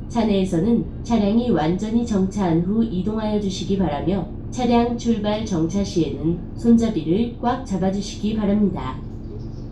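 Everyday-sound recording, no technical faults detected anywhere in the audio.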